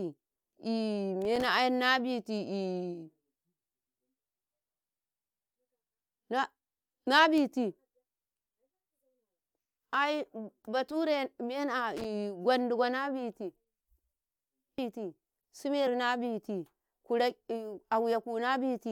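A speech recording with two kinds of fault. Loose connector crackle appears from 1.22 to 1.44 s and again from 11.97 to 12.05 s. Each burst is an irregular scratchy crackle. A worn or dirty contact is making and breaking as it moves, chopping the signal. At 15.86 s compressed frames were skipped. The sound jumps ahead by about 20 ms. That fits one missing or rejected 23.2 ms frame.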